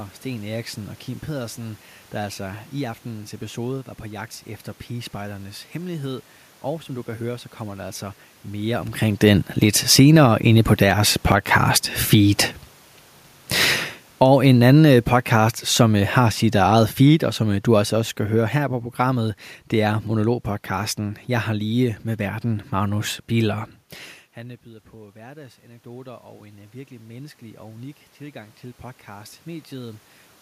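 Speech with room noise shows automatic gain rising from 10.13 to 12.49 s, just after "mere omkring den lidt", as the control lifts its gain by about 4 dB. Voice and background swell together, and the waveform envelope and spectrogram floor brighten slowly. It rises again from 24.36 to 30.1 s, by about 9 dB, after the talker moves away near 24 s and the input drops about 21 dB. Automatic gain falling runs from 14.06 to 23.63 s, a slow pull-down of about 14 dB, so the waveform tapers and the spectrogram's noise floor darkens along with the voice.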